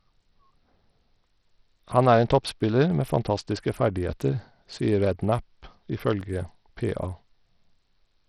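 Throughout the clip, the speech has most likely passed through Bluetooth SBC compression, and the damage is heavy. SBC splits the signal into a few wide sub-bands and shares a small bit budget among them with no hearing model, so the weakest upper bands lose their bits entirely. Nothing remains above 14.5 kHz, and the bands that survive are coarsely quantised, leaving a gritty, aliased edge on the speech. The amount of damage fits a bitrate around 64 kbps.

At 6.21 s, a block of digital silence cuts into the speech. About 2.56 ms of samples were replaced by silence. The signal drops straight to nothing and comes straight back with no fade. The hole is far too short to hear as a gap, so it comes across as a brief tick or dip where the abrupt edges meet the waveform.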